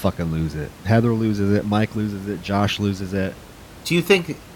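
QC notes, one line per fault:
No faults are heard in this speech clip. Room noise sits in the background about 21 dB below the speech and is part of the recording itself.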